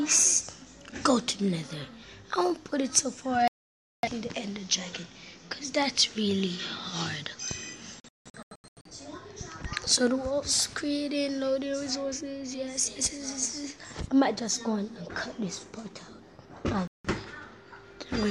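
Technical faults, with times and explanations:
3.48–4.08 s, digital broadcast dropout: the sound mutes for about 0.55 s while the receiver waits for valid frames, then resumes with that stretch missing.
8.00–8.91 s, digital broadcast dropout: several short holes scattered over 0.85 s, the longest 0.17 s, as intermittently corrupt frames are muted between good ones.
16.88–17.09 s, digital broadcast dropout: a brief 0.17 s mute, consistent with a handful of frames failing their checksum before normal reception returns.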